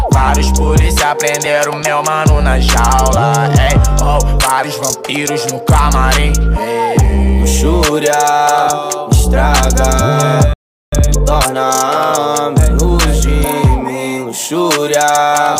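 At 10.53 s the sound cuts out abruptly and stays silent for about 0.39 s, until 10.92 s. This playback stall reads as the player running dry of buffered data, or its output thread being held up, and the gap is likely the result of such an underrun rather than anything in the source.

From 10.92 s to 11.68 s the audio runs noticeably hurried, at roughly 1.5 times normal speed, while its pitch stays where it was. This is time-compressed catch-up. To recover the delay built up during the stall, the player drops short slices of the signal and cross-fades across the joins. After 11.68 s the pace returns to normal.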